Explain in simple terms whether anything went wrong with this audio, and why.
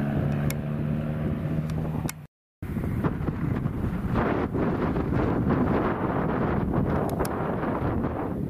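Near the end, from 7.84 to 7.90 s, there's a case of frames out of order: two neighbouring chunks of sound, each about 26 ms long, arrived swapped and were played that way. You hear a quick garbled flutter, but nothing goes missing.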